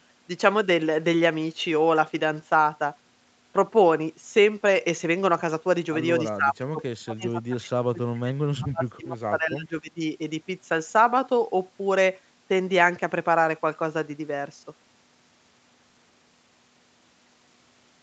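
From 6.31 s to 10.01 s the echo canceller most likely could not tell the local talker apart from loudspeaker echo while both ends were speaking, and treated the whole signal as echo. This is speech suppressed in double talk. The speech ducks for about three seconds in total, sinking at its deepest by roughly 30 dB so that parts fade almost to nothing or break up into fragments before recovering.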